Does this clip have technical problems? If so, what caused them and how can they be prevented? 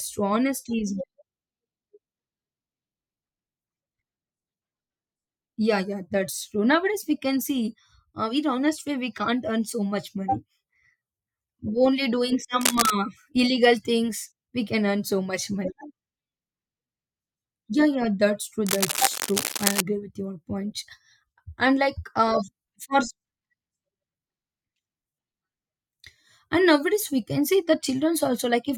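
Yes. Cable scratch noise appears from 12.60 to 12.92 s, between "only doing" and "illegal things we can", at roughly the level of the speech, and again from 18.66 to 19.81 s, somewhat quieter. Both are dense, uneven scratching bursts, likely from a worn cable or connector being moved so its contact resistance fluctuated rapidly. Replacing worn leads, cleaning connectors and securing cables so they can't shift during recording prevents this.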